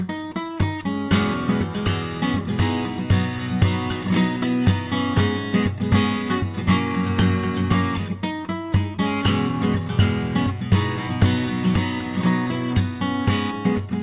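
Nothing here goes wrong at any point; the sound just carries the narrow, phone-like character of a G.711 call path, with nothing above about 4 kHz.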